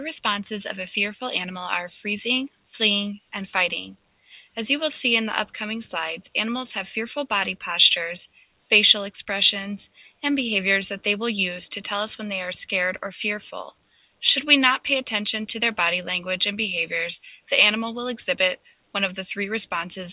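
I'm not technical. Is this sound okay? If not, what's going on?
No. Between 13.91 and 14.22 seconds, the call's noise suppressor mistook part of the sound for background noise and turned it down: the sound briefly dips well below its surroundings for about a fifth of a second, then comes back.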